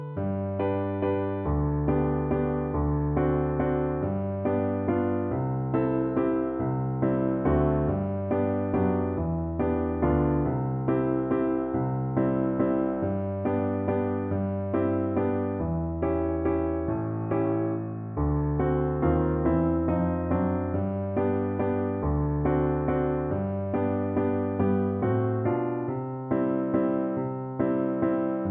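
No technical faults can be heard anywhere in the recording; the signal stays steady and intact throughout.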